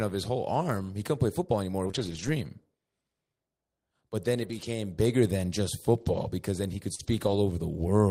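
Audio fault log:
1.83–1.89 s: lost packet rebuilt from error correction. About 40 ms, which fits two lost packets, is replayed from the low-bitrate copy carried in the following packets. There is no gap, but the speech turns briefly rough and grainy.
1.91–1.95 s: short concealed packet loss. About 20 ms never arrived and was filled by extending the preceding sound, so it is heard as a quick smear rather than as grain.
1.95–2.29 s: lost packet rebuilt from error correction. At 180 ms this is the longest rough stretch in this cluster. Speech continues without a break but sounds noisier.
4.43–4.65 s: lost packet rebuilt from error correction. About 120 ms of coarse speech with no dropout. The lasting graininess, rather than a wobble, marks it as a rebuilt copy and not concealment.
6.01–6.23 s: lost packet rebuilt from error correction. Another 120 ms of rough speech plays through without a gap.
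6.95–7.01 s: short concealed packet loss. About 40 ms is missing, and the receiver continues the last pitch or shaped noise before blending back. It sounds like a brief wobble, and a short consonant here can vanish.
6.99–7.37 s: lost packet rebuilt from error correction. It overlaps the concealment and runs for about 200 ms, the longest such stretch. The audio stays continuous but grainy before the clean sound returns.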